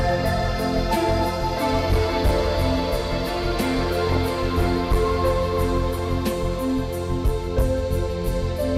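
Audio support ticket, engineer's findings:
DAB burbling, 4.07 to 4.17 s, music. Weak reception, residual bit errors passing forward error correction into MP2 audio frames. Corrupted samples and scale factors; individual sub-bands jumping in level frame by frame across several frames. Heard as brief burbling over the music, about 0.1 s. Error rate points to well under one percent. Probable cause: weak DAB reception.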